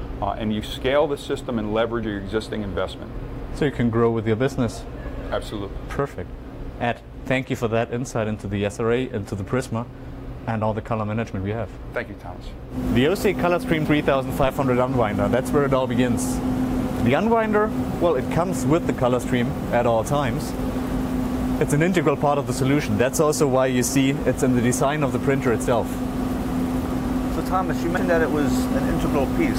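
At 2.02 to 2.04 s there's a quick glitch from damaged data in a compressed stream. The decoder hits corrupt bytes, loses frame sync and searches for the next frame header. The same blip comes back at 13.84 to 13.86 s. Right after, from 14.43 to 14.51 s, a phantom power thump lands: a supply switching on the live input pushes a step through the coupling capacitors, giving a low thud that dies away in about 18 ms. The stream corruption glitches once more at 27.96 to 27.98 s.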